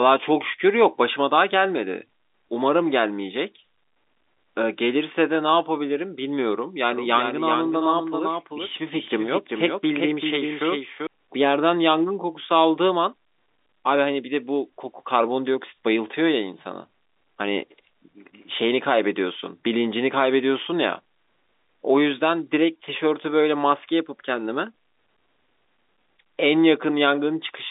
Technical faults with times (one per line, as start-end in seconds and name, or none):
6.93-11.07 doubled audio track